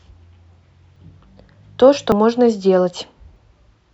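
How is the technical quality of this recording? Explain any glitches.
The speech is interrupted by three short skips. Dropped buffer (overrun), at 0.96, 2.12 and 3.36 s: each sounds like the speech jumping forward, losing about 40 ms at the first two and about a tenth of a second at the last. This is likely input buffers overwritten before being read, so the surrounding audio is spliced together without silence.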